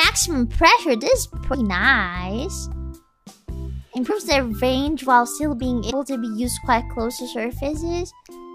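Compressed frames skipped: the decoder lost whole frames, so the audio jumps ahead by roughly 50 to 70 ms, a smeared blip, at 1.53, 4.09 and 5.89 s, which fits 26.1 ms frames.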